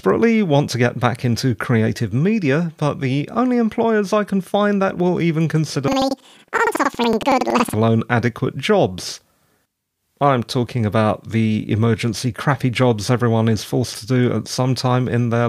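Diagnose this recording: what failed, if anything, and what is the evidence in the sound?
A sample-format conversion fault, planar audio read as interleaved, runs from 5.88 to 7.77 s, between "find that will even" and "adequate jobs". Each 93 ms block, which fits a 4096-sample buffer, replays twice at double speed, left then right. The speech jumps an octave with a 10.8 Hz flutter. A spectrogram shows harmonics shifted up and vertical seams every 93 ms.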